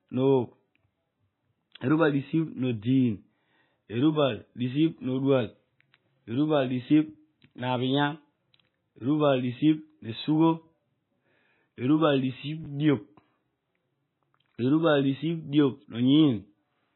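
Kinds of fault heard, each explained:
MP3 compression: The whole clip sounds watery and swirly, with heavy codec damage. Nothing is heard above 4 kHz. Weak parts of the spectrum flicker on and off. The likely cause is MP3 encoding at a very low bitrate, near 16 kbps.
Chunks out of order: Between 12.64 and 12.66 s, a 10 ms chunk of speech plays one chunk late. It comes after audio that should follow it. Nothing is lost, but the order is wrong. Three hard joins make a brief jumbled moment.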